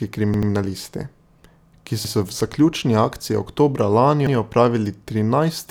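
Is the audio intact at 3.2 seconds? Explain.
Yes, the speech is intact at 3.2 seconds, with no fault at that moment.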